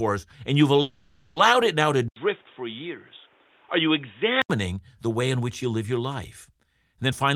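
It's a speech recording with two clear problems. From 0.81 to 1.38 s there's a call audio freeze: the sound stalls and the receiver stretches the last bit into a fading buzz for roughly half a second instead of going silent. Afterward the speech picks up right where it left off, so nothing's lost, but everything after it now runs about 550 ms late. That's likely packets getting held up in transit until the jitter buffer ran dry. Then from 2.08 to 4.50 s the input switches to a poorer device. It opens with a short 80 ms dropout, after which the sound goes dull and narrow with nothing above 3.8 kHz, drops a few dB in level, and picks up a faint new noise floor well below the speech. Around 4.50 s it clears back up. The likely cause is the system jumping to a lower-quality mic or a headset's call profile partway through the recording.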